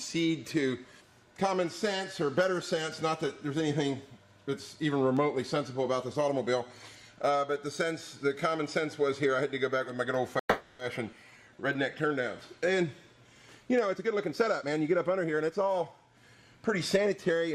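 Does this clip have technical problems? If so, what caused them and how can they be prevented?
Yes. From 10.39 to 10.81 s the sound stops and is replaced by a fading continuation of its last moment that ends in about 90 ms of silence, before the audio resumes where it left off. This is a call audio freeze, likely caused by packets delayed in transit that emptied the jitter buffer. Unlike a skip, nothing is lost; 0.4 s of filler is inserted. A deeper jitter buffer or a more stable network path would prevent it.

From 11.11 to 11.14 s there is a skip ahead. Roughly a tenth of a second of audio was discarded, probably as the buffer shed the backlog from the freeze. The two sides are spliced almost directly. An abrupt jump with content missing distinguishes it from the freeze's added gap. Gentler buffer draining through time-stretching rather than dropping audio would prevent it.

From 11.31 to 12.38 s a jitter buffer slow-down plays the audio at about 90% speed without changing pitch. 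The receiver repeated short pitch periods to add 112 ms of reserve, leaving sounds drawn out. Unlike the freeze, there is no stop, only stretching. More consistent packet arrival would prevent it.

From 13.92 to 16.43 s a jitter buffer speed-up runs the audio at about 116% at unchanged pitch. The receiver trimmed small pitch-period pieces, removing around 0.4 s, so the sound feels hurried. Unlike the skip, no single chunk vanishes. Avoiding bursty packet delivery would prevent it.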